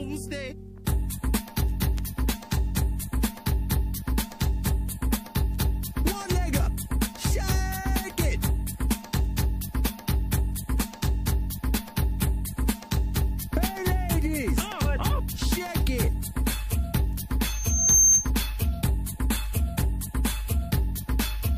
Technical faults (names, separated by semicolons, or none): pre-echo; loudspeaker feedback squeal